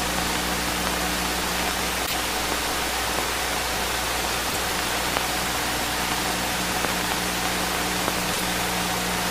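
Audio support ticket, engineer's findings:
Short glitches, about 0.11 s each, at 2.03–2.14 s, 4.46–4.57 s and 8.30–8.41 s. Damaged data in the compressed stream: decoder misreads corrupted frames, loses sync, and resyncs at the next header.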